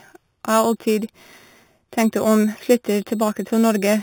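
Throughout, sample-and-hold upsampling, consistent with 8 kHz raised to 48 kHz, leaves imaging: mirrored copies from 4 to 8 kHz, about 18 dB down, a metallic fizz following the speech.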